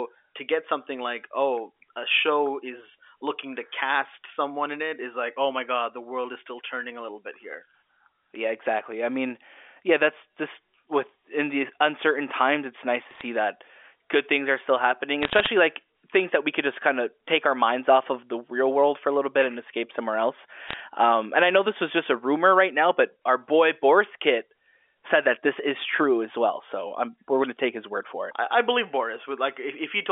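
Bit errors on a digital phone line crackle through the speech from 13.11 to 13.21 s (after "times it's nice to"), 15.22 to 15.48 s (after "things are still happening") and 20.69 to 20.80 s (after "and escape somewhere else"). Flipped bits in the A-law bytes throw single samples to wrong values. On a waveform these show as isolated one-sample spikes, and on a spectrogram as thin vertical streaks across the 4 kHz telephone band.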